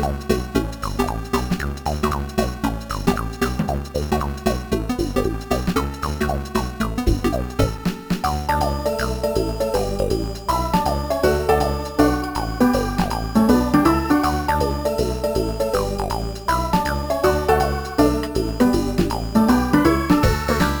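Software likely squeezed the audio from 0.0 to 7.86 s to 1.44 times speed, dropping short pieces to hold pitch. This time-stretched section sounds rushed.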